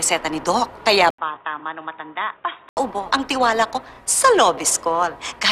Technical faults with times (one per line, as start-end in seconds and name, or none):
1.10-2.77 input switched to a poorer device